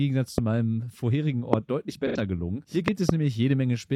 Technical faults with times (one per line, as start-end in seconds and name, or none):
0.38-0.40 loud pop
1.53-1.56 loud pop
2.07-2.16 AAC frame loss with concealment
2.88-3.11 loud pop